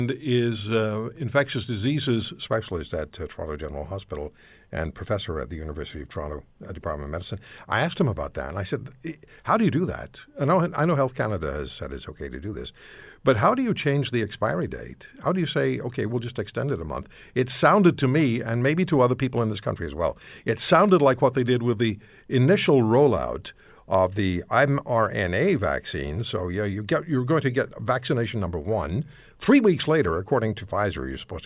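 No technical faults can be heard anywhere in the recording.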